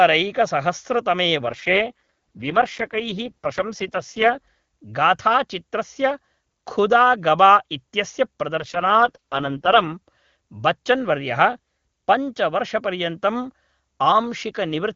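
From 1.46 to 4.39 s, and again from 8.56 to 9.94 s just after "खुदा गवा इत्यस्य", the speech turns rough, raspy and synthetic with no gap and no loss of bandwidth, then clears again. These are AMR rate drops: the link forced the wideband coder down to its lowest rates, spending bits on error protection instead of detail. The sound fits a fall from 23.85 to 6.6 kbit/s.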